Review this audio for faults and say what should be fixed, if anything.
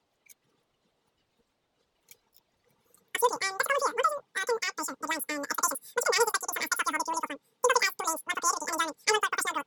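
Throughout the clip the speech is squeaky and rushed, running about 2.76 times too fast and roughly 17.6 semitones high. This is a wrong sample rate: it fits 16 kHz audio played back at 44.1 kHz without conversion, so speed and pitch rise together. To prevent it, read the file's declared rate and resample to the output device rate before playback.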